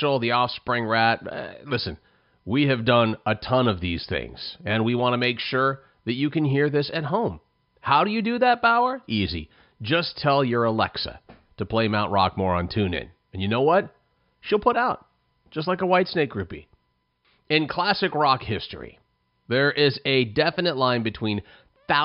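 No technical faults are audible.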